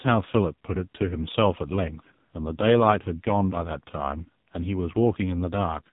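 Throughout, the speech sounds buzzy and synthetic and is cut off above 3.8 kHz. This is heavy AMR narrowband mobile codec damage, which points to a low bitrate near 5 kbps.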